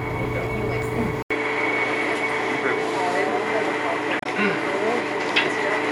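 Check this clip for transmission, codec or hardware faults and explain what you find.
Two faults are present.

From 1.23 s to the end, the audio turns duller after an 80 ms gap: nothing above 11.4 kHz, a level shift of around 5 dB and a faint new noise floor. The likely cause is the input switched to a poorer device with narrower bandwidth.

From 4.19 to 4.26 s there is damaged data in a compressed stream. The decoder misreads corrupt frames and resynchronises, producing a brief glitch.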